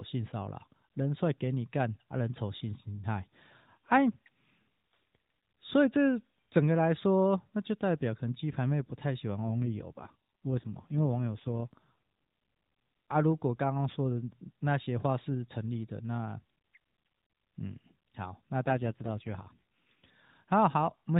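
At 9.48 s the speech suddenly gets rougher and buzzier, more synthetic, and stays that way until 11.87 s. It happens again from 18.66 to 20.12 s. Both are an AMR rate drop. The network pushes the codec down to a lower mode, and the sound fits a step from about 12.2 to 5.9 kbps. There's no gap and no change in bandwidth, since the narrowband AMR path still stops at 4 kHz throughout. There are just fewer bits describing the voice until the rate recovers.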